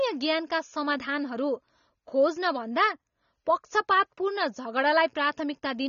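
AAC compression throughout: nothing above 6.9 kHz leaves the speech dull, smeared and warbly, likely from coarsely quantised AAC-LC at a low bitrate, around 24 kbps.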